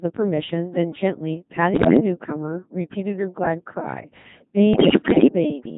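Throughout, the speech carries the Codec 2 vocoder sound. The decoder rebuilds the voice from sine waves using only pitch, voicing, energy and a spectral envelope, so the original waveform is lost. The result is heavily robotic and buzzy, which fits a 2.4 kbit/s mode.

From 1.74 to 2.00 s, bit errors on digital voice radio hit the stream. Flipped bits corrupt the frame settings for pitch, level and tone colour. The voice jumps and warbles briefly, which points to roughly a tenth of bits damaged. A longer burst runs from 4.74 to 5.28 s, and it is worse. The synthetic voice breaks into bleeps and robotic gibberish. This fits an error rate of around 15 percent across about two dozen frames.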